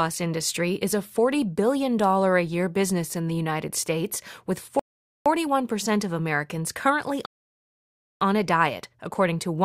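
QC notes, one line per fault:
4.79–5.26 s and 7.26–8.21 s, rebuffering stall: the speech drops to silence twice, for about 0.46 s and then 0.95 s, and picks up exactly where it broke off. The player ran out of downloaded audio and waited for more, so time is added but nothing is skipped.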